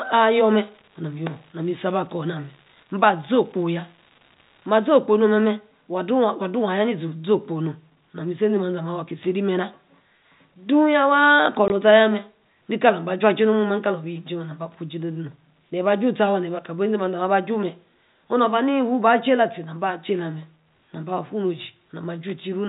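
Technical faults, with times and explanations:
0.0 to 4.86 s, unreliable data bit: a fine, even crackle runs under the speech and carries on through the pauses, because one marginal data line flips its bit in a random share of samples, each error making an identical spike. Unlike dropouts, nothing goes missing; the fizz is simply added, and it stops cleanly at 4.86 s.
11.68 s, packet loss filled with silence: the speech is cut by a single 20 ms hole, the length of one packet, with hard edges, because the receiver played silence where the packet went missing. Unlike the crackle, this removes the sound outright rather than adding noise to it. The telephone-band G.711 A-law coding is heard throughout as a cap on the top end, not as a fault.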